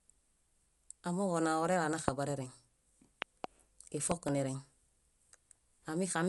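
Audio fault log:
throughout: Dolby Digital compression, likely at a low bitrate near 64 kbps, removes everything above 11.4 kHz and fills starved bands with noise, making speech dull and rough.
2.08–2.10 s, 3.22–3.46 s, 4.11–4.30 s: loud pop. Sudden voltage steps, likely, give one pop then two pairs, about 25, 20 and 15 dB above the speech, which continues beneath.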